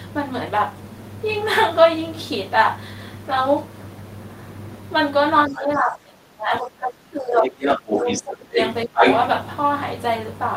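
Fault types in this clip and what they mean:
speech suppressed in double talk: From 5.48 to 8.58 s, and briefly from 8.84 to 9.03 s, the talker's speech sinks by as much as roughly 20 dB. The likely cause is an echo canceller that, with both sides talking, could not separate the talker from loudspeaker echo and attenuated everything.
other side's voice leaking through: A second voice intrudes at 5.56–5.62, 7.44–8.23, 8.57–8.67 and 8.96–9.16 s. It ranges from well below the talker to above them. This is likely loudspeaker playback that the echo canceller failed to remove from the microphone.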